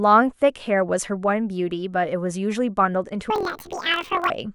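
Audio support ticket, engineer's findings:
Planar audio read as interleaved, 3.30–4.30 s: speech jumps an octave with a 43.1 Hz flutter. Channel blocks replay at double speed, consistent with 1024-sample (23.22 ms) buffers.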